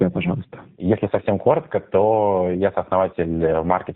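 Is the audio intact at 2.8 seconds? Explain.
No. At 2.8 seconds, as throughout the clip, the speech shows tandem speech coding: it passed through AMR-NB, then G.711, then G.729A, so two speech codecs compounded their losses. It sounds rough, muffled and warbly. A spectrogram shows nothing above 3.7 kHz and smeared, unsteady harmonics.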